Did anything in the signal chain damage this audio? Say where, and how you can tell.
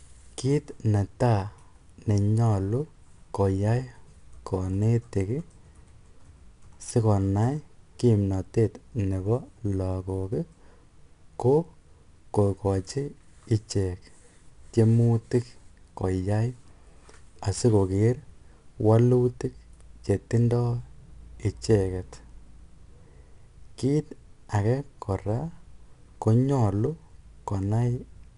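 Yes, at the codec stage. Throughout the speech there is a plainly audible gritty hiss that rises and falls with the voice, loudest on strong syllables and roughening sharp onsets, and nothing is present above 10.6 kHz. That is 4-bit ADPCM compression: each sample is coded as a coarse 4-bit step from a predicted value, so the quantisation error tracks the signal level. The lost top end fits a bitrate near 89 kbps.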